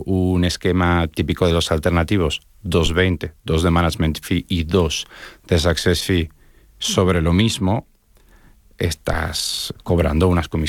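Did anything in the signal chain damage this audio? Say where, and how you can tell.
Yes: a phantom power thump at 2.86 to 2.95 s, right after "típico de los alternativos", damaged the audio at the analogue input stage. The speech is hit by a deep, low-frequency thump peaking at about -9 dBFS that dies away in roughly 19 ms. That points to phantom power, or a similar supply, being switched on or off on the live microphone input. The sudden voltage step passed through the coupling capacitors into the preamp and was recorded as a single bass-heavy pulse.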